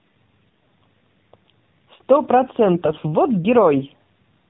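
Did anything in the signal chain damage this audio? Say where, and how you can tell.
Yes. The codec stage damaged the whole clip: it was coded with the AMR narrowband mobile codec. Nothing is audible above 4 kHz, and the speech has a buzzy, synthetic edge that is plainly audible. That edge points to one of the lower AMR-NB modes, around 7.4 kbps. A plain 4 kHz low-pass filter would leave the voice smooth and natural. This buzz comes from rebuilding the voice through a vocal-tract model driven by sparse pulses.

The network stage added AMR bit errors from 2.74 to 2.97 s, roughly a dozen 20 ms frames. In that stretch the speech keeps its pitch and level but turns hoarse, scratchy and gargly. That fits a few percent of the weakly protected bits flipping in transit, which put the excitation pulses in the wrong places and threw off the finer gain and spectral values. Packet loss would sound different: it leaves gaps or smeared, repeated concealment rather than rough, still-continuous speech.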